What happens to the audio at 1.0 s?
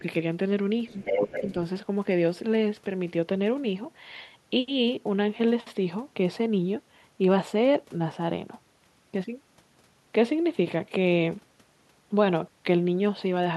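At 1.0 s a second voice from the far end of the call is audible, running from 0.88 to 1.52 s at roughly the same level as the main talker. This is other side's voice leaking through, likely residual loudspeaker echo that the echo canceller failed to remove from the microphone signal.

Overlapping that, from 0.91 to 1.02 s, the main speech dips by about 10 dB for roughly a tenth of a second. This is speech suppressed in double talk, likely the echo canceller turning down its own talker while both sides were speaking at once.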